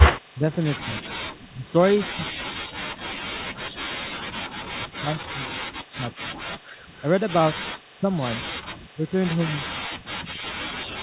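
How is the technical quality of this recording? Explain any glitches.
The quality is poor: the clip is a phone-call speech recording with two recurring faults. An echo leak appears in three places, and the talker is pushed down by double-talk suppression for most of the length. The whole recording is narrowband, with nothing above 4 kHz, which fits a G.711 call path.

The echo leak occurs at 0.00–0.12 s, 7.00–7.31 s and 9.10–9.40 s. Each time, a copy of the speech returns 169 ms late. In the first instance it is about as loud as the speech itself, and in the later two it is about 25 dB down. The likely cause is a loudspeaker at the far end whose echo canceller failed to remove everything its microphone picked up. On a spectrogram this would show as a duplicate of the harmonic pattern, shifted 169 ms to the right.

Speech suppressed in double talk runs from 0.34 to 6.31 s, with the speech affected for roughly four seconds in total and dropping by up to about 40 dB. 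It occurs again briefly at 6.86–6.93 s, a dip of about 25 dB, and from 7.52 s to the end, again up to about 40 dB. The speech dips, thins and breaks into pieces, likely because an echo canceller turned everything down while both sides were talking. The waveform would show a ragged, gated envelope with sudden troughs, and the spectrogram would show gaps and missing upper bands.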